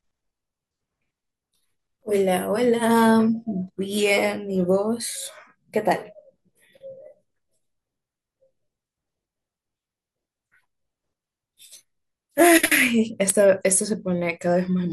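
No technical faults can be heard anywhere in the recording.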